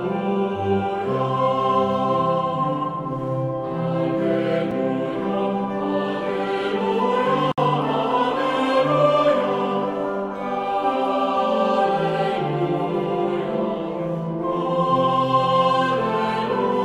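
A sharp tick at 4.71 s marks a block of digital silence: about 5 ms of audio drops straight to silence and returns with no fade. This fits an output buffer that wasn't filled in time. At 7.52 s the audio opens into a hole lasting about 60 ms, ending at 7.58 s, then resumes exactly where it stopped. This is a gap at a join of encoded pieces: separately encoded sections were spliced without trimming the encoder's start-up delay and final-frame padding, leaving smeared edges.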